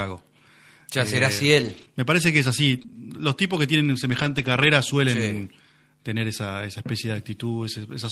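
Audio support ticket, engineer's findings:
Scattered short gaps, 1.61–4.68 s in speech. About three brief holes, 60 ms missing in total, longest around 15 ms. Network packet loss/lateness; receiver concealment extends preceding sound, leaving small ticks and smears across roughly 1% of the span.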